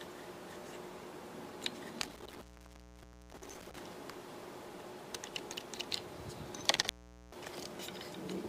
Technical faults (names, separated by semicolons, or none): intermittent contact